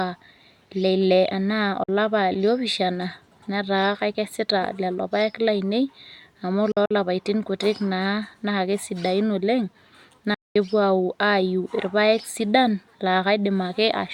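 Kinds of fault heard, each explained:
Bluetooth dropout: The speech cuts to silence three times, at 1.83 to 1.89 s, 6.72 to 6.91 s and 10.34 to 10.56 s. After each gap it resumes further on, as if it had kept playing. The first hole is 46 ms. The second is broken up: 93 ms lost across 186 ms, in runs up to 46 ms. The third is a solid 209 ms. The likely cause is audio packets reaching the headphones late and being dropped.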